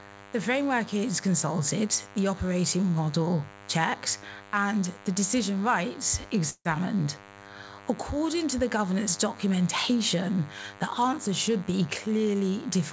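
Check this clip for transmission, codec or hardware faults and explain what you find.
Three faults stand out: a constant buzz under everything, a short freeze in the middle, and a rushed stretch near the end. The band stops at 8 kHz, which fits a G.722 call path.

The DECT cordless phone buzz runs the whole length of the clip. A nearby DECT handset or base fires a radio burst every 10 ms, and something in the audio circuitry rectifies it, so you get a thin, steady buzz at 100 Hz with a stack of harmonics. It sits roughly 20 dB below the wanted sound, low but always there.

The call audio freeze runs from 6.50 to 6.68 s. The receiver stretches the last bit of sound into a fading buzzy tail, then goes quiet for about 70 ms, filling roughly 152 ms in total. The likely cause is packets stalling in transit and the jitter buffer running dry. Nothing is lost. The audio picks up exactly where it stopped, now 152 ms later than before.

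The jitter buffer speed-up runs from 11.18 s to 12.91 s. The buffer is holding more than it wants, so the receiver trims out tiny pitch-period-sized slices again and again to catch up. In total it drops about a tenth of a second. Playback runs at 107% speed with the pitch unchanged, so this stretch sounds a little hurried.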